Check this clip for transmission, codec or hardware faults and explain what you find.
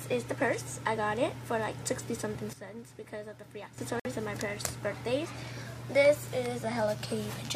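Two faults turn up here, both within about a second and a half of each other.

From 2.53 s to 3.78 s there's a sudden gain jump: the level drops by about 11 dB in a single step and climbs back just as abruptly at the end. The background noise falls and rises right along with the sound, which is the giveaway. Nothing was faded; a gain setting or bit shift was applied instantly, so each edge lands hard and can carry a small click. That's the likely cause, given how clean the steps are.

Then at 4.00 s, running to about 4.06 s, there's a Bluetooth stall. The audio cuts out for roughly 55 ms and then comes back. What you're hearing is the headphones' buffer running empty: interference held up the radio packets, nothing was left to play, and output paused until the resent data arrived. That's likely what happened here, since the gap is short.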